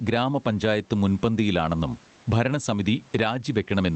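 Speech with gain pumping throughout: the level is pulled down under every loud syllable, swinging by around 10 dB. The likely cause is gain set far too high feeding a fast limiter. On a waveform the envelope looks flattened, and a spectrogram shows the room noise, which sits about 39 dB below the speech. Content above 8 kHz is cut off, which fits an Opus call path.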